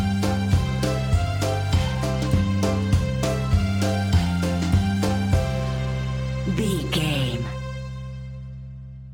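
From start to finish the audio carries imaging from linear upsampling. The top end sounds dulled, and a faint metallic shimmer rides on the sibilant and bright material. That fits a rate doubling from 24 kHz to 48 kHz done by straight-line interpolation between samples, which filters poorly. A mirrored copy of the spectrum is left sitting between 12 kHz and 24 kHz, roughly 30 dB below the signal.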